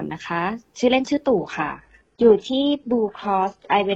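At 1.38 s the sound abruptly dulls and stays that way to the end, with nothing above 11.4 kHz and more artefacts, yet no gap. This is an adaptive stream at a lower bitrate, consistent with a switch to a low-bitrate HE-AAC version.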